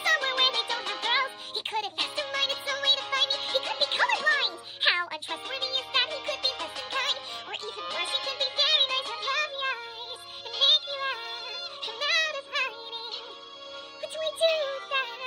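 A wrong sample rate runs through the whole clip: the samples are being played back faster than they were captured, with no rate conversion in between. Everything moves 1.5 times too fast, and pitch rises by the same ratio, about seven semitones, so the audio sounds high, tight and hurried from start to finish. That 3:2 ratio points to material captured at 32 kHz being played out at 48 kHz.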